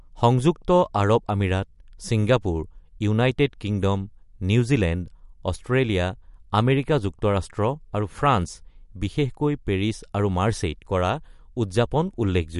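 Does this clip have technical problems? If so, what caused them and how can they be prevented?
Yes. Throughout the speech, nothing is heard above 11.2 kHz, and the sound has a plainly audible watery, swirling quality on sibilants. This is likely MP3 compression at a low bitrate, around 60 kbps. The encoder cuts the treble and drops weak frequency lines frame by frame. To prevent it, keep a lossless master and encode at 128 kbps or higher.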